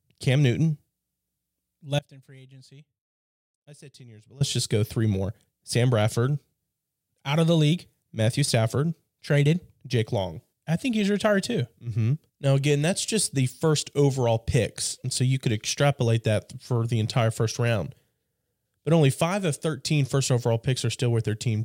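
A break in the signal path, likely on the input side while the path downstream stayed live, causes an audio dropout to a faint residue from 1.99 to 4.41 s. For about 2.4 s the speech cuts abruptly to a faint leak roughly 25 dB down, returning at "just go three more".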